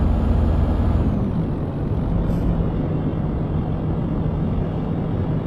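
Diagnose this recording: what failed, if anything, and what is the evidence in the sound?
At the network and codec stage, the adaptive stream dropped to a lower bitrate from 2.14 s to the end. The change is sudden and gapless, the waveform runs on unbroken, but codec artefacts rise and the treble is cut off at about 12.3 kHz. On a spectrogram the upper band ends in a hard ceiling at 2.14 s. The sound points to a switch from roughly 96 kbit/s AAC to a 16 kbit/s HE-AAC rendition when the connection slowed.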